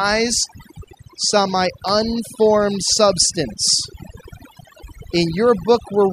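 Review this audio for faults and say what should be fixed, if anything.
Overdone noise removal runs through the whole speech clip. The denoiser was pushed so hard that individual frequency bands near its noise estimate are dropped almost to nothing, and the softer parts of the voice are cut away with them. The result is a background of near silence dotted with twinkling specks. To prevent it, reduce the reduction depth or apply denoising in gentler passes.

Electrical switching spike at 1.89 s, just after "saw my". A sharp snap or tight cluster of clicks sits on top of the speech. It is likely a brief arc from a nearby switch, motor or static discharge that the audio line picked up. It lasts only about a millisecond, so it can be repaired with a click-removal tool. To prevent it, keep switching gear and motors away from the audio cabling and use balanced, shielded lines.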